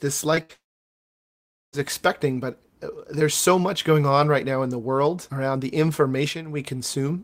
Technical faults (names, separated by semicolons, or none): short concealed packet loss; burst of packet loss; long network dropout